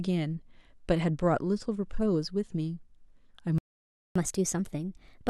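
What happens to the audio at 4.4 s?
From 4.16 s to the end of the clip at 5.30 s, the speech is in catch-up at higher speed. After a stall, the player plays its buffered backlog about 1.15 times faster by resampling, so timing and pitch rise together, here by roughly two semitones. That coupling is what separates it from a time-stretch speed-up, which keeps pitch steady, or a plain pitch shift, which leaves the pace unchanged.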